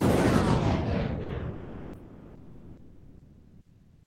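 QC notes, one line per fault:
1.23–1.29 s and 1.53 s to end: sound dropped by the voice detector, likely Opus DTX. A 60 ms gap, then from 1.53 s to the end, with about 1.4 s of real sound lost, swapped for steady comfort noise. Unlike packet-loss concealment, there is no smeared repetition, just a clean cut to flat noise.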